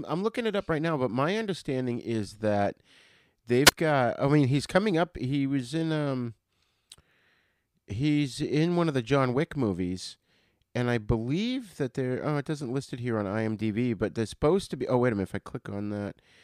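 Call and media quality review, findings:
Wireless microphone squelch dropout, 3.65 to 3.72 s, just before "got i mean he's". Hiss swells briefly, then a hole of near silence, about 21 ms. Component: analogue FM radio link and receiver. Mechanism: RF signal fades, receiver squelch mutes output. Speech resumes after the gap.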